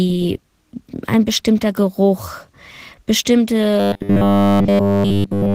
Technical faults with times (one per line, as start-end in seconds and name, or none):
0.00-5.55 Opus voice compression
3.80-5.54 robotic sound from repeated short buffers